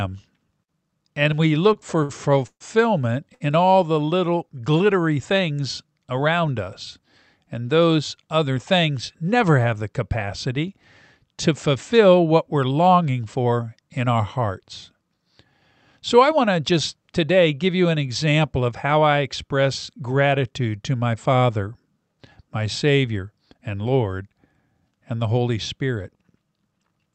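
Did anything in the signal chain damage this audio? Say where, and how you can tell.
Yes. At the network and jitter-buffer stage, packets arrived late between 1.73 and 3.42 s, just after "and we" and before "all the". The buffer ran dry four times, giving repeated stalls (stutter): the receiver stretched the last sound to fill about 270 ms in total, the longest gap 134 ms. Nothing is lost, but the speech drags and hiccups.

The same buffer then over-filled and applied a jitter buffer speed-up, cutting short pitch-period slices three times. At 9.20–9.59 s it ran at 111% speed, about a twentieth of a second removed. At 13.37–15.09 s, after "fulfill what we're longing", it ran at 106%, about a tenth of a second removed. At 16.40–17.03 s, before "today give you an", it ran at 107%. The pitch holds, but delivery sounds briefly hurried.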